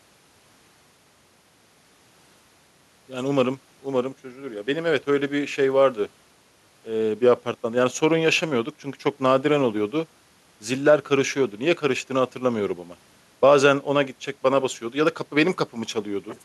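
Nothing here trips the ear as a technical fault: no dropouts, clicks, glitches or other breakdowns turn up anywhere in the recording.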